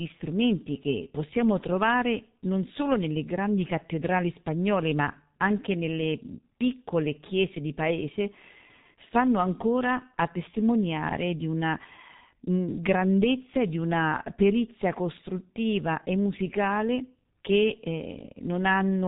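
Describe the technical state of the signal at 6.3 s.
At 6.3 s the speech sounds muffled and hoarse, with smeared consonants and nothing above 3.8 kHz. This runs throughout the clip and points to heavy G.723.1 codec damage at around 6.3 kbit/s, whose coarse, slowly updated voice model blurs the speech.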